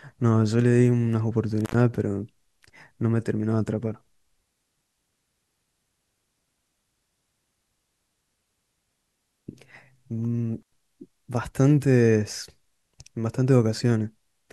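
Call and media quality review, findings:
Two brief dropouts in the speech with crackle at both edges: 1.61 to 1.80 s (line open about 87 ms) and 10.61 to 10.74 s (about 97 ms). Intermittent contact. A loose cable or plug momentarily breaks the signal path, then reconnects.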